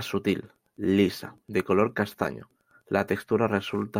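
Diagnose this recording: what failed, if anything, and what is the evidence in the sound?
Wi-Fi interference runs through the whole speech clip as a faint, steady ticking roughly 45 dB below the speech, repeating every 102.4 ms, just under ten ticks a second. The fault sits in the analogue wiring. A nearby Wi-Fi radio's beacon transmissions are picked up by the audio circuit, and a nonlinear junction rectifies each radio burst into an audible click. The strictly regular spacing matches the beacon interval, not acoustic noise or a digital dropout.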